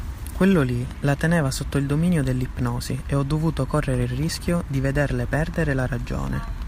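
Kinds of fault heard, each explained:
No faults heard in this clip.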